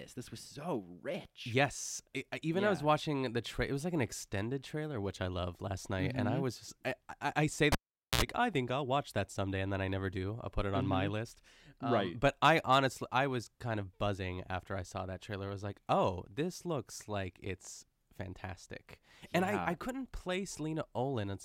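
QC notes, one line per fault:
7.72–8.22 s, cable pulled and plugged in: a pop at 7.72 s, then about 450 ms of near silence with the signal path broken, a 68 ms burst of 60 Hz mains buzz while only the plug tip touches, and a second pop at 8.22 s as the speech returns.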